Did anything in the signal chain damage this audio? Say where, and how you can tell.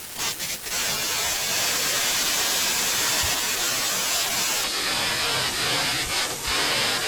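Yes. From 4.64 s to the end of the clip there is a section at the wrong speed: the speech drops to 0.675 times its recorded rate, sounding slow and about seven semitones lower. The likely cause is a playback or editing stage running this segment against the wrong clock. On a spectrogram, harmonics and formant bands step downward at 4.64 s and spread out in time. On the waveform, each pitch period looks correspondingly stretched.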